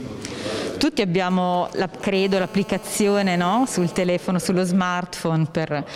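From 1.30 to 2.03 s, GSM signalling bursts gallop in as brief 217 Hz buzzes. A nearby 2G phone's radio pulses are rectified, roughly 20 dB below the sound. From 2.15 to 4.06 s, a steady GSM phone buzz follows. The phone is in a call, pulsing 217 times a second. It gives a hard, raspy tone about 19 dB down.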